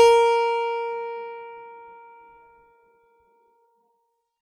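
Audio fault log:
No audible faults.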